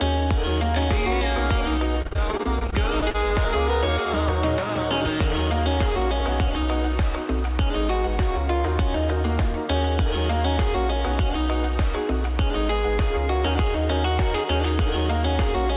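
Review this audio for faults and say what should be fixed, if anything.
From 2.02 to 3.16 s the sound turns choppy and robotic. Repeated packet loss leaves short holes, the longest about 40 ms, each patched by stretching the previous sound. Adding jitter-buffer headroom or forward error correction on the call link would prevent it. Throughout, nothing reaches above 4 kHz, which fits the narrowband G.711 call path.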